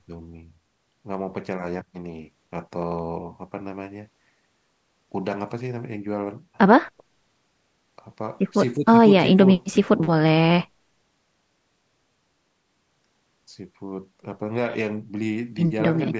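No technical faults can be heard in the speech. It has passed through call microphone processing, which trims the lowest bass and leaves nothing above 8 kHz.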